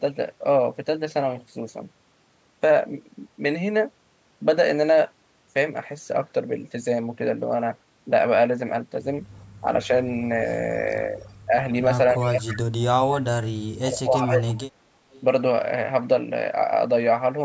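A delayed copy of the speech trails it by 314 ms at 9.32–9.44, 11.17–11.33, 12.17–12.81, 14.16–14.55 and 15.11–15.2 s. It is barely audible at first, then fairly loud around 12.2 s. This echo leak is likely a loudspeaker at the far end whose echo canceller let part of the returning signal through. The speech itself also dips. It sags slightly at 9.61–9.9 and 11.12–11.55 s, then drops out heavily in pieces across 12.14–14.89 s. That is speech suppressed in double talk, likely the canceller turning down the local talker along with the echo it could not separate.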